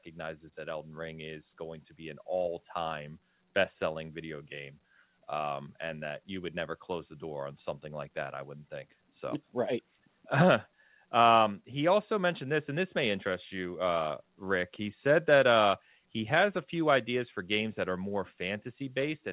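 Nothing stood out on listening to this speech, which comes through a telephone-grade call path whose band stops at about 4 kHz.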